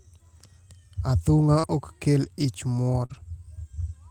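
At 1.59 s, just before "ok kel ich muor", a short concealed packet loss fills about 40 ms: the decoder extends the preceding sound to cover missing data, heard as a brief smear, and it runs into a lost packet rebuilt from error correction at 1.63 to 1.65 s. The 20 ms rebuilt section plays from a low-bitrate backup copy carried in the next packet, so there is no gap but the sound turns rougher and noisier, consistent with a single recovered packet. After "ok kel ich muor", the pattern repeats: another concealed loss of about 40 ms at 3.05 to 3.11 s smears the sound again, and error-correction recovery follows at 3.09 to 3.15 s. This time about 40 ms of coarser, noisier audio comes from the backup copies, which points to two recovered packets.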